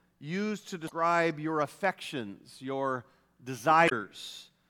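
Damaged data in the compressed speech stream throws the decoder off its frames, giving brief glitches at 0.85–0.92 s and 3.85–3.92 s.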